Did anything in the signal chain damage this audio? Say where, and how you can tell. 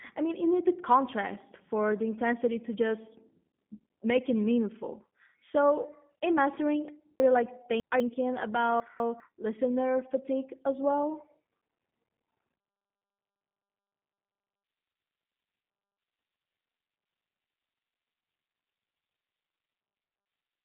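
Yes. The G.729 codec damage runs through the whole speech clip, at the codec stage. The band is cut to roughly 200 Hz to 3.6 kHz, with nothing above 3.7 kHz, and the voice has a plainly rough, synthetic, buzzy edge. This fits G.729A at 8 kbit/s. It rebuilds each 10 ms frame from a vocal tract filter, a pitch predictor and a few coded pulses rather than sending the waveform, so fine detail and the upper band are discarded.

Chunks out of order occur at 7.2 to 8.0 s and again at 8.8 to 9.2 s, just before "listener fatigue as well". This points to a buffering, network or storage stage that reassembles audio in blocks. Both stretches sound jumbled. The segments are 200 ms long. In the first, one chunk plays three chunks late. In the second, it plays one chunk late. Nothing is missing, but each misplacement leaves three hard discontinuities where mismatched waveforms butt together.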